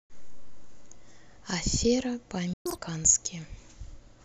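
At 2.53 s the speech cuts out into silence for 120 ms, a playback stall, likely the player running dry or its thread being blocked. Unlike a dropout that skips material, the sound resumes at 2.66 s exactly where it stopped, with nothing missing.

From 2.66 s to 2.78 s the player does a catch-up at higher speed, running its backlog at 2.0 times speed, so the voice jumps up by around ten semitones. Speed and pitch rise together and then snap back, tied to the preceding stall.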